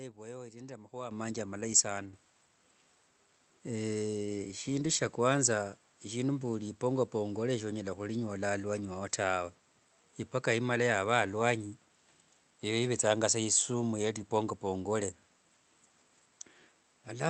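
Microphone volume stepped up at 1.11 s, after "vwaiyo iri nde amahua", and again at 2.13 s, after "amahua manji amalayi saana": the input gain jumped about 9 dB, then about 7 dB, lifting voice and background together.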